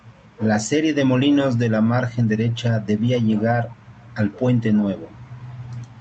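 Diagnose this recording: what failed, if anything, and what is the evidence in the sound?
A faint, delayed copy of the speech surfaces briefly between 3.68 and 3.76 s, trailing the original by about 241 ms and sitting far below it. This is an echo leak at the call-processing stage, likely from a far-end loudspeaker whose echo canceller let residual pickup return.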